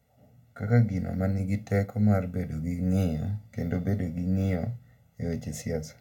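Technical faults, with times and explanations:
Throughout, channel delay (comb filtering): one channel lags by roughly 1.5 ms, so summing cancels around 300 Hz and at evenly spaced odd multiples, giving hollow speech and fixed horizontal spectrogram stripes.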